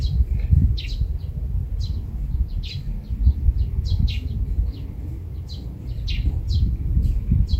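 No technical faults are audible.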